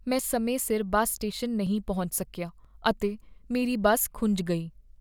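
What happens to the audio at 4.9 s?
Nothing goes wrong at 4.9 s; the speech carries on intact through that moment.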